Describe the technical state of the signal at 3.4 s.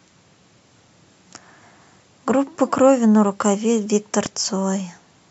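At 3.4 s the speech signal is intact, with no dropout, clipping, glitch or other technical fault to be heard at that moment.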